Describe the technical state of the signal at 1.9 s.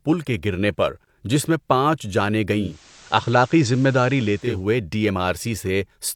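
At 1.9 s the speech signal is intact, with no audible fault at that moment.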